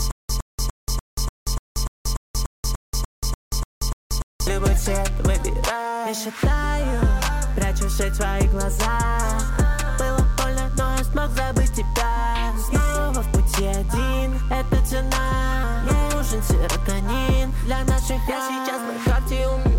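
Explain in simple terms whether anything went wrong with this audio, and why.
Stutter with silent gaps, from the very start until 4.47 s: a short 0.11-second burst of sound repeats about every 0.29 seconds, with 0.18 seconds of dead silence between. The player likely stalled, replaying its last fragment at each retry, so the intended audio there is lost.

DECT cordless phone buzz, throughout the clip: a faint, thin, steady buzz at 100 Hz sits underneath everything. A nearby cordless phone or its base sends a radio pulse every hundredth of a second, and the audio circuitry picks it up as sound.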